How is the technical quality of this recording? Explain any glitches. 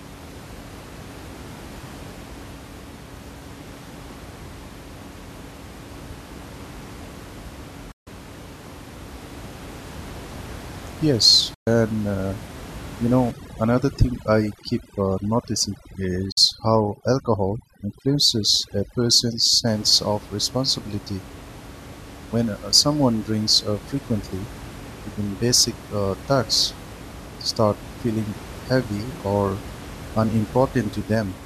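The recording has two kinds of fault: three short digital broadcast dropouts and a stretch of overdone noise removal. The room noise sits about 17 dB below the speech.

The digital broadcast dropouts occur at 7.91 to 8.07 s (144 ms), 11.54 to 11.67 s (120 ms) and 16.31 to 16.38 s (48 ms). Each time, the receiver stopped getting decodable frames and muted until valid data resumed. The durations fit whole frames of about 24 ms being discarded. Each gap starts with a quick fade of about 8 ms and then goes to complete silence, and whatever was transmitted during the gap is gone.

The overdone noise removal runs from 13.31 to 19.67 s and ends just before "of responsibility". A noise reducer set too aggressively suppressed individual frequency bands whenever their level fell near its noise estimate. Quieter parts of the speech were cut along with the background. As a result, the room tone drops and breaks up into twinkling, warbling specks. 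The third dropout falls inside this stretch.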